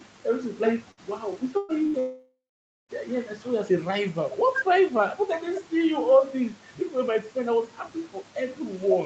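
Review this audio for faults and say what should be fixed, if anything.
Three bursts of packet loss hit the speech at 0.91 to 1.00 s, 1.57 to 1.72 s and 1.87 to 1.97 s. Consecutive packets went missing, about 60, 120 and 60 ms of speech, and the receiver stretched the last sound into a fading buzz or hiss before skipping ahead.

From 2.00 to 2.92 s the sound likely reflects a long network dropout. Roughly 0.9 s of audio is gone. The concealment fade runs for a few tenths of a second, then the last half second is dead silence before the speech resumes further on. The Opus call path, limited to 8 kHz, comes through intact around these gaps.

Fix the connection's loss and stalls by enabling Opus in-band FEC and a larger adaptive jitter buffer, and investigate the network link behind the dropout.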